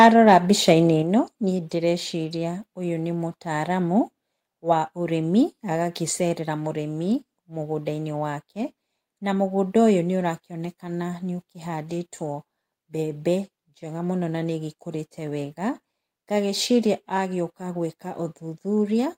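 Speech, with a microphone volume step-down at 1.02 s: level drops by about 5 dB at once, likely the call software lowering input gain, seen as a sudden waveform narrowing.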